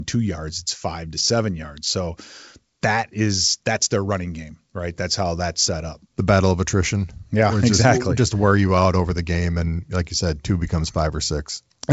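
Nothing here counts as a fault; the speech simply carries the gentle top-end ceiling of G.722 wideband telephone coding, with nothing heard above about 7.7 kHz and at most faint coding traces, which fits the codec's full 64 kbit/s mode.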